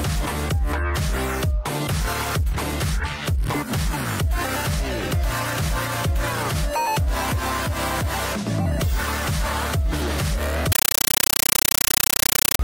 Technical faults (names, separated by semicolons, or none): compressed stream played as audio